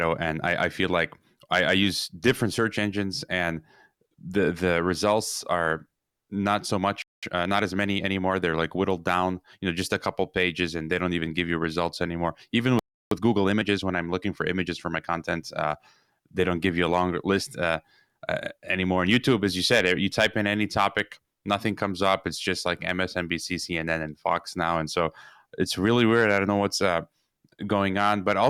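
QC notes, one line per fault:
7.02–7.23 s, playback stall: the speech cuts to silence for about 0.2 s after "results are not so". The likely cause is the player running out of data.
7.23–8.59 s, time-compressed catch-up: the speech runs about 1.15 times fast at normal pitch until "like whittled down you". Small pieces are cut and cross-faded to clear the backlog.
12.79–13.11 s, playback stall: after "you results anymore even", the sound drops out for about 0.32 s. It then resumes where it stopped.
13.11–15.25 s, time-compressed catch-up: the speech is hurried again at about 1.15 times, pitch unchanged, until "uh they don't give".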